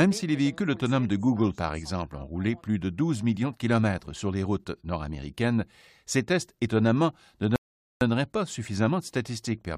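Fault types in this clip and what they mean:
Rebuffering stall: the player used up all the speech it had downloaded and had to wait for more data before it could go on. In this clip the sound cuts abruptly to silence at 7.56 s and holds there until 8.01 s, then picks up exactly where it broke off, with nothing missing. The gap adds about 0.45 s of dead air to the running time rather than removing any of the speech.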